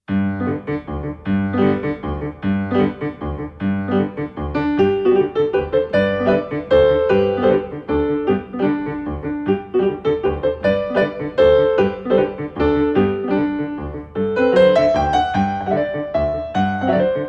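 Nothing is technically wrong with the audio.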